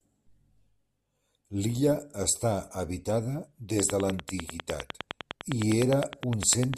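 From 3.80 to 6.75 s, a train of clicks, likely interference, ticks regularly at 9.9 per second: about thirty waveform spikes, thin vertical spectrogram lines.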